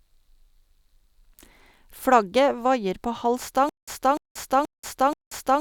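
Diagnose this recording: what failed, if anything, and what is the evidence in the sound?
From 3.69 s to the end of the speech, the sound breaks into a stutter with silent gaps. A fragment about 296 ms long repeats four times, each followed by about 184 ms of dead digital silence, so the burst returns every 479 ms at a steady pace. The likely cause is a playback or streaming buffer stall: each retry replays the last fragment and then runs dry, and the speech that belonged in that span is lost.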